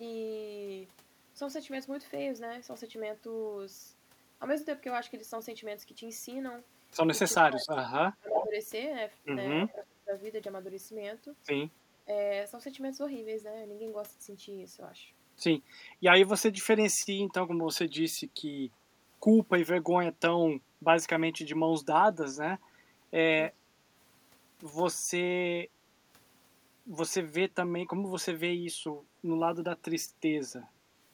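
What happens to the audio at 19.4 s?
At 19.4 s the speech falls inside a stretch of speech suppressed in double talk, running from 18.89 to 19.76 s. Within that window the level dips by up to about 10 dB. The dips add up to only around a tenth of a second. The likely cause is an echo canceller facing both sides talking at once. It cannot tell the near talker from the loudspeaker echo, so it turns both down.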